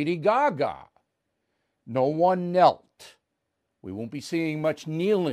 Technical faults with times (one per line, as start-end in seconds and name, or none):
3.85-5.32 sample clock jitter